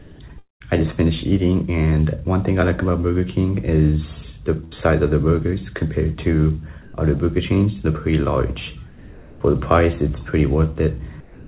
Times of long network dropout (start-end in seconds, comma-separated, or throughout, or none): 0.38-0.62